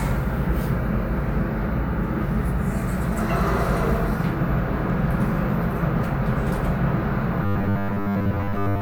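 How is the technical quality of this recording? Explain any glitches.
The recording has one glitch, near the end. Robotic sound from repeated short buffers runs from 7.44 s to 8.82 s. The likely cause is audio arriving too seldom, so the software fills most of that stretch by replaying a roughly 10 ms slice while fresh audio is skipped. That constant repetition stamps a fixed 100 Hz pitch onto the sound, turning it into a rigid, metallic buzz that only loosely tracks the original.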